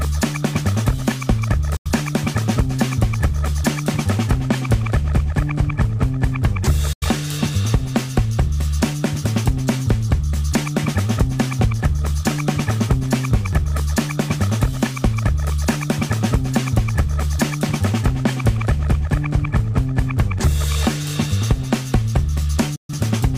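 Digital broadcast dropouts mute the audio at 1.76–1.90, 6.93–7.06 and 22.76–22.94 s, each an 8 ms fade to silence while frames are lost.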